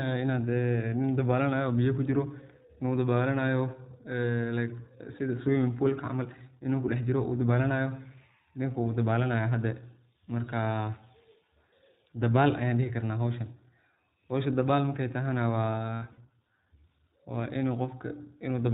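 Throughout, the iLBC codec makes the speech rough and slightly synthetic. The spectrogram stops flat at 4 kHz, which fits 20 ms iLBC frames at 15.2 kbps.

From 15.94 to 16.20 s, after "howsha dabaal markey tahana", lost iLBC frames are filled with repeated pitch cycles: buzzy held-vowel patches that show as uniform striations, in runs up to about 70 ms.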